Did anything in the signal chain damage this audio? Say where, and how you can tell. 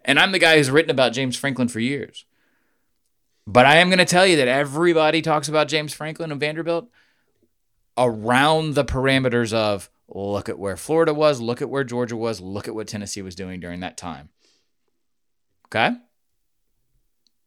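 Yes, at the codec stage on the Bluetooth link. From 13.38 to 15.60 s the speech turns dull and gritty, with the treble dulled and a rough grain in its place. This is a Bluetooth SBC bit pool drop. To hold a congested link, the sender cut the bits per frame, which fits a bit pool falling from 28 to 14, around 108 kbps. The top sub-bands received almost nothing and the rest were coarsely quantised.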